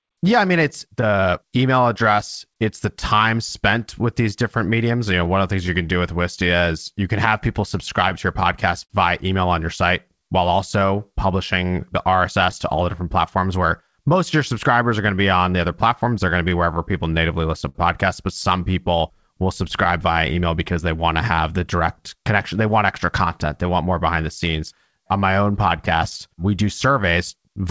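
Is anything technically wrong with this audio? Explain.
Yes. The speech runs through a G.722 call path that carries nothing above 8 kHz, and several timing faults are audible on top of it.

Clock drift between sender and receiver runs through the whole clip. The sender's clock is about 5% slow, so the receiver's buffer keeps running low. Unlike a single network dropout, this produces a steady tendency rather than one event, and the small hiccups recur at uneven intervals throughout.

Repeated timing corrections are heard from 0.10 to 27.61 s. To keep pace with the slow sender, the receiver repeatedly stretches short pieces, running the speech at about 96% speed and adding roughly a second overall. Every edit leans the same way, so the tempo sounds slightly dragging and unsteady rather than broken.

Scattered short gaps occur from 0.86 to 13.9 s and again from 23.40 to 26.13 s. Isolated packets arrived late, and the receiver filled each hole by continuing the previous sound. 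The first stretch has about fifteen patches, the longest around 50 ms. The second has about three tiny ones. Nothing is lost, and the patches sound like brief ticks or smears scattered at random, not a steady drift.

A short stall from a late packet occurs at 17.69 to 17.77 s. The buffer ran dry, and the receiver held the last sound for 60 ms until the packet arrived, then resumed from the same point. It is one prolonged moment with a slight buzz or dip, distinct from the scattered smaller patches.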